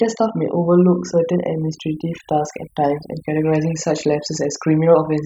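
Overdone noise removal runs through the whole recording. The noise reduction was set too hard, cutting individual frequency bands down or out wherever they sat near its noise estimate. The background drops away and breaks up into twinkling specks, and quieter parts of the speech vanish.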